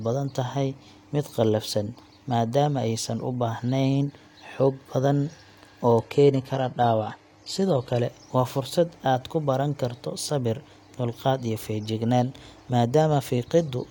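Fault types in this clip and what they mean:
Adaptive stream at a lower bitrate: From 6.00 to 8.00 s the speech abruptly turns thinner and more synthetic, with nothing above 14.9 kHz and stronger codec artefacts. There is no gap. This fits a brief switch to a roughly 20 kbit/s HE-AAC stream.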